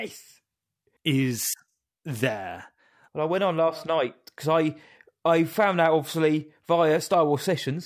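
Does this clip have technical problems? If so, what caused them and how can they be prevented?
No, there are no technical problems to report in this speech recording. Since nothing went wrong, there is no cause to identify and nothing that needs preventing.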